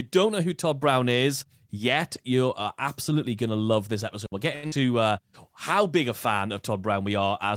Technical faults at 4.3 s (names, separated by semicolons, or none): digital wireless dropout